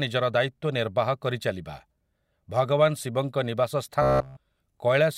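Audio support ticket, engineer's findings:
Robotic sound from repeated short buffers, 4.02–4.37 s, right after "ଭଗବାନ ଶିବଙ୍କ ନିବାସ". Rigid metallic buzz at 66.7 Hz, likely playback buffer underrun looping roughly 15 ms of audio. The whole stretch is repeated. Fixed-pitch buzz, not silent gaps, separates it from plain dropouts.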